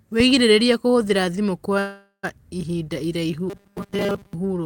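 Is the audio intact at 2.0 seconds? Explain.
No, a call audio freeze runs from 1.79 to 2.25 s: the last sound is stretched into a fading buzz ending in about 90 ms of silence, likely from delayed packets draining the jitter buffer.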